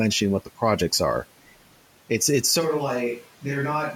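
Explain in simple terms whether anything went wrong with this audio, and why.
At 2.62 s the voice suddenly turns hollow, roomy and quieter, with more background noise, until the end. This is likely a switch to a distant microphone.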